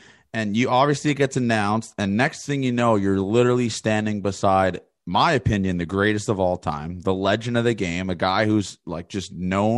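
A speech recording with nothing technically wrong to point to at any time.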